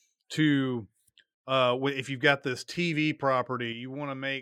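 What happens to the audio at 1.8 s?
Nothing goes wrong at 1.8 s; the audio runs through that moment intact, with no fault to be heard there.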